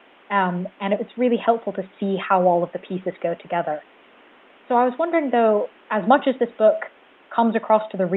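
No technical faults are audible.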